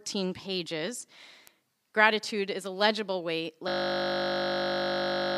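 At 1.47 s and again at 2.66 s, just before "a legible weight", a bit error spike produces a single sharp tick. One sample jumps by a power of two and returns at once. On a waveform it shows as a lone needle, and on a spectrogram as a thin vertical line spanning all frequencies.

From 3.68 s, right after "is a legible weight", a system hang loop takes over until the end. The driver stalls while the hardware keeps replaying one 20 ms buffer about 85 times, giving a steady 50 Hz buzz. The waveform shows an identical repeating block, and the spectrogram shows horizontal harmonic lines spaced 50 Hz apart.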